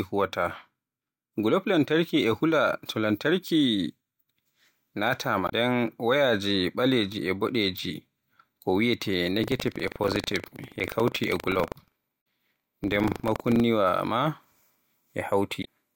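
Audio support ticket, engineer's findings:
Damaged data in a compressed stream: short glitch at 5.46–5.52 s, 12.18–12.21 s and 15.61–15.67 s. Probable component is the decoder input, where corrupt frames cause a sync loss and a resync at the next header. Distinct from tearing: isolated, tens of milliseconds each, no periodic pattern.

Buffer tearing: robotic 25 Hz rattle from 9.4 to 13.62 s, present only while sound plays. Probable component is the output ring buffer. Writer and hardware reader have drifted into overlap, so a small slice of each period replays audio roughly 70 ms old with hard joins. The 25 Hz rate fits a 40 ms period. Differs from stream damage: sustained, steady rate, tied to signal presence rather than single events.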